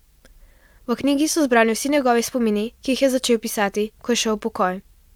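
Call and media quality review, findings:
No audible transmission or processing faults detected; the speech signal shows no dropouts, distortion, timing irregularities or level anomalies across the clip.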